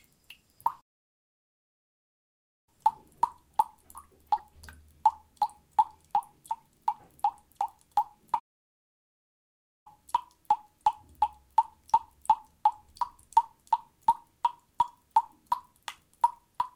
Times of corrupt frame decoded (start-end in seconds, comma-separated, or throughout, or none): 4.37